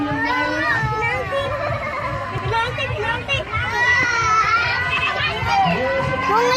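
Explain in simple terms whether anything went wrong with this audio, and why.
A short stutter is heard at 2.38 and 4.98 seconds. These are overlapping chunks: the audio was handled in pieces about 2.5 seconds long, and each join replays 100 milliseconds twice.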